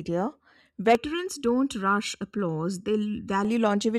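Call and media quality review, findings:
Channel delay (comb filtering), 0.95–3.45 s: one channel late by under a millisecond, summed to mono; speech turns hollow, phasey, notches evenly spaced from around 700 Hz.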